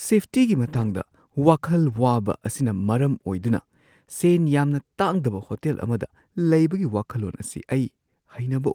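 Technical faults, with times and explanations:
0.65–0.91 s, lost packet rebuilt from error correction: about 140 ms of speech turns briefly rougher and noisier, consistent with several lost packets replaced by low-bitrate copies carried in the following ones. Unlike plain concealment, there is no gap or smeared, repeated sound.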